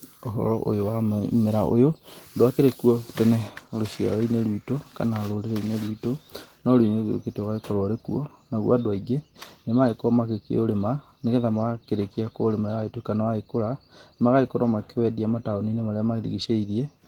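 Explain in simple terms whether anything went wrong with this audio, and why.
Nothing went wrong with the signal: the speech has gone through Opus voice compression working as intended, which keeps the full range of sound and leaves only a light trace of the coding.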